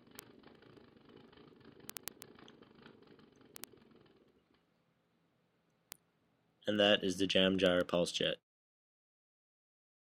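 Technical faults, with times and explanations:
0.12 s to 10.09 s, word clock ticks: a receiver running on its own clock, unlocked from the sender's and off by roughly 700 parts per million, slips against the incoming stream about every 0.04 s, so some three hundred times. Each slip misreads samples and drops or repeats one, giving sharp ticks of uneven strength at around 25 per second, fast enough to merge into a rattle or buzz. A spectrogram shows a comb of thin, evenly spaced vertical lines, and the waveform shows single-sample glitches at regular intervals.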